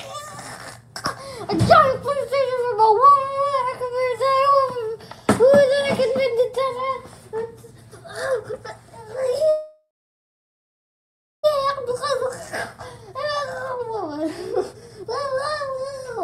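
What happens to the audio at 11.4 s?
At 11.4 s you're right at the tail of a call audio freeze that runs from 9.49 to 11.45 s. The last bit of sound gets stretched into a fading buzz or hiss, then about 1.56 s of dead silence, and just after 11.4 the audio picks up exactly where it left off. Likely the packets got held up in transit and the jitter buffer ran dry, so nothing's lost, but everything after lands about 1.94 s late.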